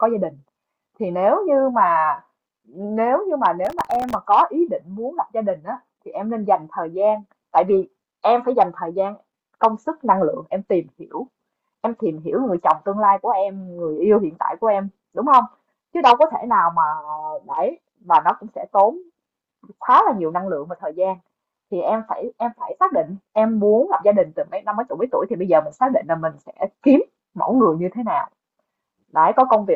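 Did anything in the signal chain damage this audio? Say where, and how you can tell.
Yes: processor overload crackle at the driver/buffer stage, 3.65–4.15 s. Dozens of sub-millisecond buffers missed their deadlines, each repeating stale audio with hard edges, producing gritty tearing.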